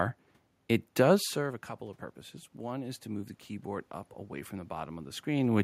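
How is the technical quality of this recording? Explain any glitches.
One glitch is audible: automatic gain rising from 1.08 to 5.59 s. When the talker moves back around 1 s, the input drops about 15 dB. The gain control then slowly climbs about 7 dB, swelling the voice and room noise together.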